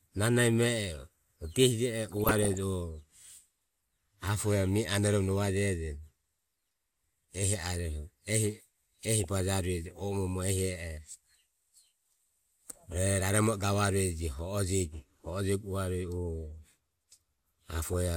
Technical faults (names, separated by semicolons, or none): DAB burbling